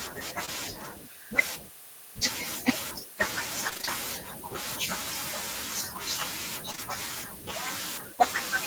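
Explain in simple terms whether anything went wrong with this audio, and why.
Something did go wrong, in three places. At about 0.45 s, and again at 6.71 to 6.80 s, there is a brief smear or wobble, as if a tiny piece of the speech was smoothed over. This is short concealed packet loss. During the call, about 20 milliseconds of sound arrived too late to use. The receiving end covered each gap by stretching out the sound just before it, then blended back into the real speech. At 6.71 s two of these gaps come back to back.

From 3.69 to 3.89 s the speech turns choppy, with bits seeming to drop out. This is repeated packet loss, heard as a robotic sound. Over that fifth of a second, several short pieces of sound went missing one after another, none longer than about 20 milliseconds. Each gap was patched by repeating the sound just before it, and about half of that stretch is patched sound rather than real speech. 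So many patches close together give it the robotic quality.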